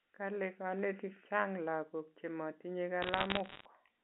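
From 3.02 to 3.65 s, bit errors on a digital phone line flip individual samples, scattering sharp ticks over the speech; the waveform shows isolated spikes and the spectrogram thin vertical lines.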